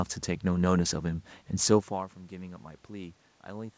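Nothing here is a system fault: the background room noise and the level shift near 1.5 s as the talker moves relative to the microphone belong to the recording, and the absence of content above 8 kHz is simply the expected band limit of the 64 kbps G.722 call path.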